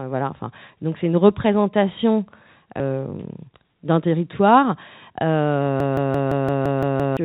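Speech, carried over a call path whose narrowband G.711 mu-law coding leaves nothing above 4 kHz. At 2.80 s there is a skip ahead. Playback jumps forward with no gap at all. Roughly 0.4 s of speech is simply gone, and the two sides meet almost directly. Audio was dropped while newer audio was already queued. The listener hears a sudden lurch in the flow rather than silence.

From 2.90 s to 5.11 s comes a jitter buffer speed-up. Speech runs at about 111 percent of normal speed, yet the pitch stays the same. The delivery sounds hurried. The buffer had built up too much delay. To drain it, the receiver cut out many tiny slices, each one or a few pitch periods long. Together they remove around 0.3 s over the stretch.

From 5.80 s to 7.17 s there is a system hang loop. One piece of audio, 170.67 ms long, repeats exactly eight times. That gives a machine-gun stutter at 5.86 Hz. The loop length fits an 8192-sample ring buffer. 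The computer or its driver froze, while the sound hardware kept replaying the same buffer. Roughly 1.5 s of real speech never plays.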